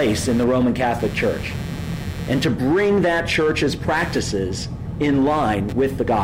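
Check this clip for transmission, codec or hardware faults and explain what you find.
One hardware fault is present, running through the whole clip. Computer activity noise is there from start to finish: changing load in the processor, graphics card or mouse shifts the ground shared with the audio circuit, so a buzzing, chirping pulse train, somewhere around 150 Hz and roughly 20 dB below the sound, rises and falls with the machine's activity rather than with the audio itself.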